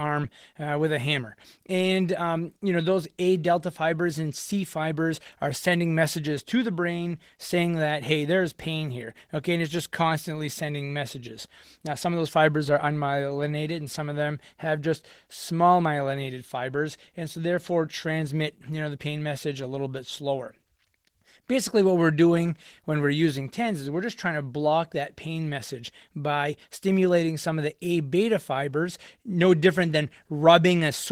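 All through the speech there's plainly audible Opus voice compression: hoarse, slightly robotic voicing from coarsely coded excitation, which fits a 16 kbps hybrid mode.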